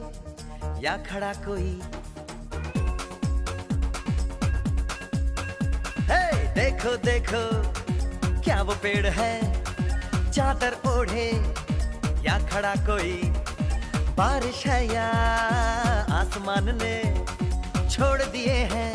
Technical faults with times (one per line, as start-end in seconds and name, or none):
none